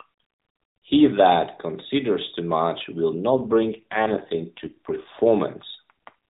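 From 3.30 to 5.11 s there is an AMR rate drop: the link weakens and the codec falls back to fewer bits per frame, which fits a step from 12.2 down to 4.75 kbps. The narrowband speech, lightly coded before, turns rougher and buzzier, with no gap or band change.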